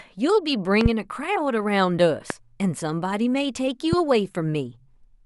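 Loud pops hit this speech clip at 0.81–0.88 s (a double pop) and at 2.30–2.33 s and 3.93–3.95 s, each peaking about 15 dB above the speech. They are likely from a sudden voltage step such as static or a switching glitch.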